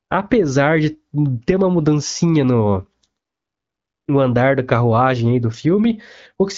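AMR bit errors occur from 3.19 to 3.45 s, just after "ter uma mudancinha no". For about a quarter of a second, a span that fits some thirteen 20 ms frames, the weakly protected bits of the AMR-WB stream arrived flipped at a heavy rate of roughly one in seven. The frames still decoded, so the excitation pulses landed in the wrong places and the pitch, gain and spectral details drifted. The speech keeps its pitch and loudness but turns hoarse, scratchy and gargly, against the clear wideband sound on either side, which fits a 12.65 kbit/s mode.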